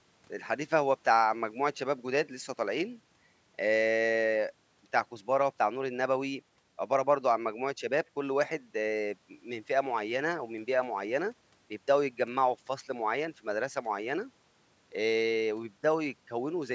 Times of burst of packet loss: none

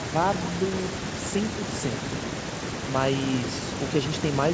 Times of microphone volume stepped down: none

